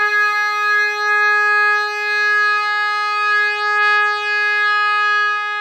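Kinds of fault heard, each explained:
Doubled audio track: the whole music mix plays a second time about a second behind itself, roughly 5 dB quieter, full-band and dry with no room tail. It's likely a second capture path or an edit leaving two copies out of step, so everything is heard again as a clean echo.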